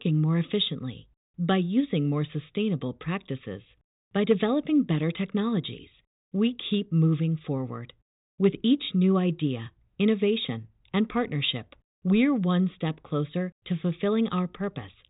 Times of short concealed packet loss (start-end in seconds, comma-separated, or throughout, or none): none